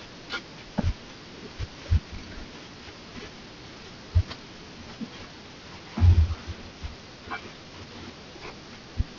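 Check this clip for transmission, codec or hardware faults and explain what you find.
Aliasing runs through the whole speech clip. The audio was resampled to a much lower rate without first removing content above half the new rate, so energy above 6 kHz folds back into the band below it at unrelated frequencies. The band edge at 6 kHz fits a drop to a 12 kHz rate. Sibilants sound gritty and metallic, with the folded energy sitting around 20 dB below the speech. On a spectrogram, energy runs hard up to 6 kHz with mirrored, misplaced streaks beneath.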